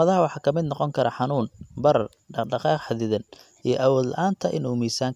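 No technical faults can be heard anywhere in this recording.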